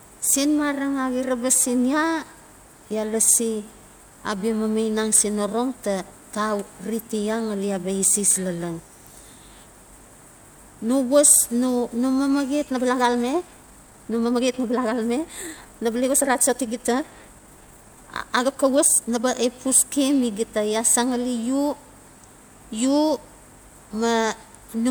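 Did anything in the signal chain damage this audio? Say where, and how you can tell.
Yes. From 12.62 to 19.34 s the speech turns abruptly rushed at unchanged pitch. This is likely a time-stretched section, sped up 1.42 times by dropping short slices.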